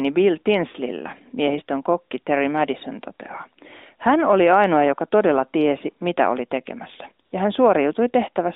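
At 7.26 to 7.32 s, just after "tiesi mitä oli tekemässä" and before "ja hän", there is a burst of AMR comfort noise. For about 60 ms the phone treated the talker as silent and sent no speech frames, so the receiver filled the gap with smooth synthetic noise. The real background drops out and a flat hiss takes its place. On a spectrogram the gap shows as an even grey patch confined to the narrow telephone band, and the waveform shows a low, uniform band with no texture.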